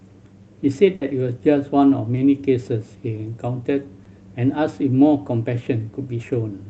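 A speech recording carried over a call link, with the sound stopping at 8 kHz as the codec's bandwidth limit. At 0.95 s the voice stretches into a held buzz or hiss that fades until 1.03 s, then picks up further along, skipping roughly 60 ms of speech. This is a burst of packet loss: a run of packets never arrived in time, so the receiver continued the last sound for about 60 ms and lowered it before rejoining the real stream. At 2.15 s and again at 4.03 s there is a brief smear, like a small wobble, where a short consonant can drop out. These are short concealed packet losses: about 20 ms of audio failed to reach the decoder, and the receiver filled the gap by extending the preceding sound, following its pitch if voiced or using shaped noise if not, then blended back into the incoming audio.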